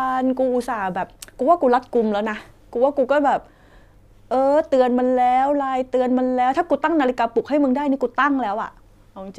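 Just speech, and there's nothing technically wrong to flag anywhere in it.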